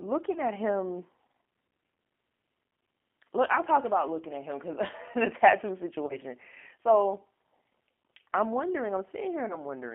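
From start to finish the speech carries the sound of the G.729 codec, here the G.729A variant at 8 kbit/s. The band runs only from about 250 Hz to 3.4 kHz, and the damage is plainly audible: a slightly rough, synthetic grain as each 10 ms frame is rebuilt from a vocal tract filter, a pitch predictor and a few pulses. A simple telephone band-limit would sound thin but clean, without this artificial texture.

At 0.32 to 0.41 s comes the first VoIP packet loss concealed by the speech codec. About 30 ms of frames are missing, and the decoder stretches the preceding sound into a fading buzzy tone or coloured noise. A single 10 ms frame goes at 1.95 s. Between 3.47 and 3.61 s, just before "talk about looking at", 40 ms of loss is scattered over about 100 ms in runs no longer than 20 ms. After "the tattoo", 6.06 to 6.18 s loses 30 ms. After "I'm wondering", 9.48 to 9.59 s loses 20 ms. Plain packet loss would leave silent gaps or clicks. 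Here the gaps are filled with smeared, decaying sound, and the speech stays weak for a moment after the packets return.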